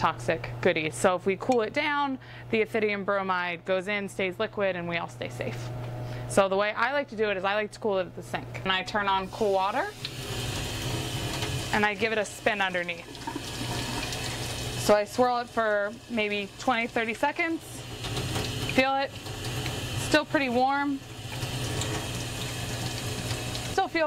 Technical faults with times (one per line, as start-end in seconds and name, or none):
none